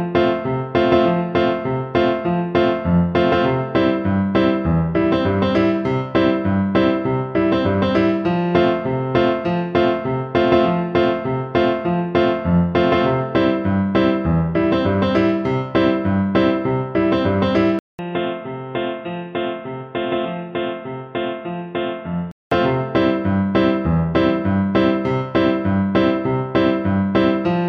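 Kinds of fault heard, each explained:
Input switched to a poorer device: after a 200 ms gap the sound goes dull, slightly quieter and band-limited to 3.8 kHz, likely from switching to a narrower microphone.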